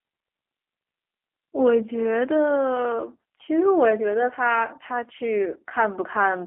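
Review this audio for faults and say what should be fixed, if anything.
The speech carries G.729 codec damage from start to finish. It is plainly audible. The sound is narrow, confined to roughly 250 Hz to 3.4 kHz. Nothing bright survives above that. The codec rebuilds each short frame from a vocal tract filter, a pitch estimate and a few pulses, so the voice turns slightly rough and synthetic. The coarseness fits an 8 kbit/s G.729A stream. Prevention: record or route the call through a wideband codec such as G.722 or Opus instead.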